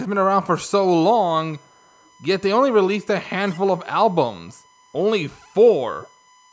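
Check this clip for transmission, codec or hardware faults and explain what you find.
Three kinds of fault are present: a steady USB whine, two brief echo leaks, and four dips where speech is suppressed during double talk.

USB whine runs from 0.74 s to the end of the clip as a fixed 1 kHz tone, about 35 dB below the speech. Current drawn in 1 ms USB frames is reaching the audio path through power or ground, and that 1 ms period produces the constant whine at 1 kHz.

Echo leak appears at 1.66–2.07 s as a very faint copy of speech delayed 424 ms, roughly 40 dB down. A shorter one at 3.86–3.91 s is delayed 450 ms and about 30 dB down. The likely cause is a far-end loudspeaker echo that the echo canceller did not fully remove.

Speech suppressed in double talk shows as level drops at 2.81–3.21 s (around 20 dB), 3.55–4.15 s (around 25 dB), 4.36–5.03 s and 5.41–5.53 s (around 10 dB each). The likely cause is an echo canceller that could not separate the local talker from loudspeaker echo while both sides spoke, so it attenuated both.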